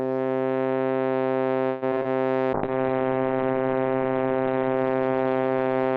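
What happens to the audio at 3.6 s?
At 3.6 s the music is inside a call bitrate drop that begins at 2.54 s and lasts to the end of the clip. The encoder's rate fell from 48 kbps to 8 kbps, holding its lowest level for about 1.7 s, so it codes coarsely and narrows the band from 20 kHz to 4 kHz. The music turns muffled and watery. On a spectrogram, everything above 4 kHz is cut off flat.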